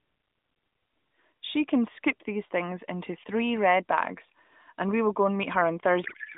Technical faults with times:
6.04-6.38 codec payload misread

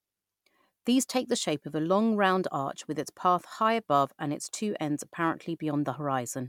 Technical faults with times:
none

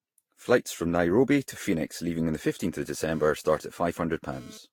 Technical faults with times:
0.00-4.72 generation loss
3.11-4.58 GSM phone buzz

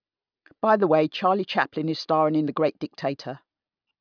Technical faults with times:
none

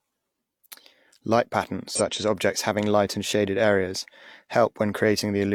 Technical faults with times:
1.95-2.01 damaged data in a compressed stream

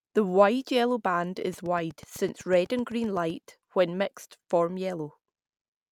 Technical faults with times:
1.53-3.31 train of clicks

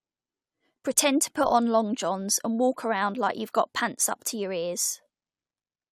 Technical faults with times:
none

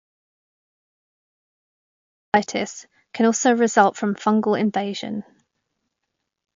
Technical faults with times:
0.00-6.56 MP3 compression
0.00-2.34 audio dropout to silence

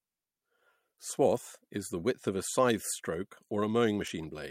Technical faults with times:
none

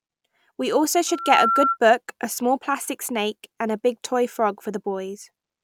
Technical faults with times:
1.07-1.78 loudspeaker feedback squeal

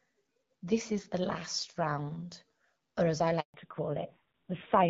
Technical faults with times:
3.40-3.54 handover gap
3.54-4.89 fallback to narrowband

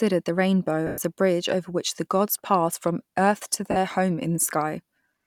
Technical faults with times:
0.87-0.98 lost LE Audio frames
3.71-3.77 lost LE Audio frames

